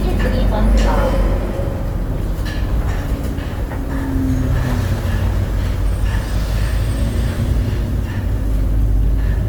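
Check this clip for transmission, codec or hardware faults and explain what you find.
One codec fault runs through the whole clip. Opus compression is plainly audible from start to end. Its likely source is the CELT music mode at a low rate, which fits about 24 kbps. Band energies are kept, but starved bands get filled with folded or noise content. Tones turn grainy and rough. Bandwidth stays full, reaching about 20.2 kHz.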